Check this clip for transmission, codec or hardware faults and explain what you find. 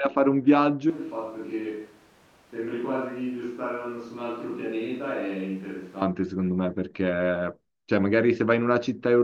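One fault stands out in the speech: a switch to a distant microphone from 0.90 s to 6.02 s. The sound abruptly turns roomy and hollow, loses bass, and drops roughly 10 dB. Room noise rises to sit only about 25 dB below the speech. The likely cause is that the close microphone's signal dropped out and a farther pickup, such as a camera mic, took over. At 6.02 s the close, full sound returns just as suddenly.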